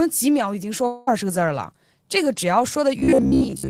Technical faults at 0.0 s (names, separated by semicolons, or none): none